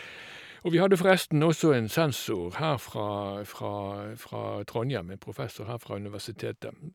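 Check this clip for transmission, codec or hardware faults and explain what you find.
Nothing stood out on listening to this speech recording.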